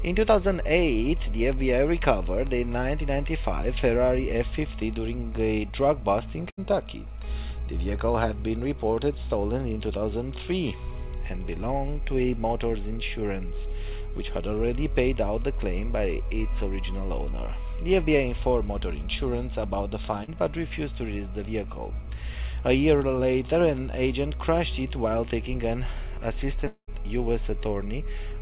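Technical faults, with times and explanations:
6.5 to 6.59 s, burst of packet loss: Around 80 ms of consecutive audio data failed to arrive in time, so the receiver extended the last stretch of sound for roughly 74 ms and lowered its level as the gap went on. The result is a brief held buzz or hiss that fades, then an abrupt jump forward. The jump comes because the audio resumes past the missing portion rather than catching up on it.
20.24 to 20.29 s, short concealed packet loss: About 40 ms never reached the decoder, and the receiver patched roughly 38 ms of it by continuing the preceding sound, pitched if voiced and as shaped noise if not, before blending back into the real signal. What you hear is a momentary smear or wobble. Through the call path's band, which stops at 4 kHz as fits G.711 mu-law at 64 kbps, any short consonant-like detail caught in that window can simply disappear.
26.67 to 26.89 s, long network dropout: Around 200 ms of audio is absent, likely because the network stopped delivering data altogether for that stretch. 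The receiver kept generating the last sound for about 199 ms as a fading buzz or hiss, and within that, the final 90 ms or so decays into silence. The audio then resumes further along, and the content from the lost interval never plays.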